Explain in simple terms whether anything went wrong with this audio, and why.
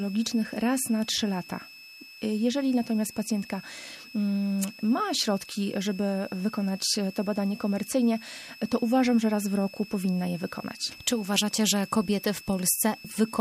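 A switching supply whistle runs from start to end. It is a thin, high tone near 2.6 kHz, wavering slightly. It sits clearly beneath the sound. It comes from a switching power supply running in an audible burst mode or beating with another one.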